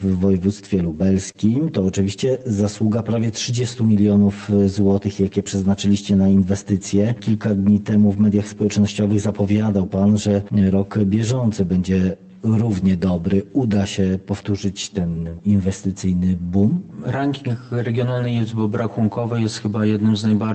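From the start and through all 20 seconds, the sound is hollow and phasey from channel delay (comb filtering). One channel trails the other by roughly 10 ms, and when the two are summed, the shared content cancels at evenly spaced frequencies, the first notch near 50 Hz and the rest about every 100 Hz above it. Unlike a flanger or a drifting phase effect, these notches never move. The coloration stays fixed and static across the whole clip.

Underneath runs clock drift between sender and receiver. Here the sender's clock is about 3% slow, so the receiver's buffer keeps draining rather than overfilling. This is not random network jitter. The direction never changes, and the same kind of small timing slip recurs for the length of the clip instead of appearing as one isolated glitch.

Those slips are the repeated timing corrections, heard from 0.06 s to 20.46 s. To cover the shortfall, the receiver keeps repeating short pieces of audio. 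Playback runs at 97% speed and roughly 0.7 s is added in total, which comes through as faint hiccups and a slightly dragging, unsteady tempo. This differs from packet loss because nothing is dropped. Every edit lengthens the audio and none shortens it, though the spacing between edits is uneven.

At 1.31–1.38 s there is a short stall from a late packet. The buffer ran empty and the last sound was stretched by 30 ms until the packet arrived, then playback carried on from the same point with nothing missing. It sounds like a brief held sustain, not a gap or a dropout. That sets it apart from a loss concealment, where audio would actually be replaced. It is heard against the band-limited call path, which tops out around 8 kHz.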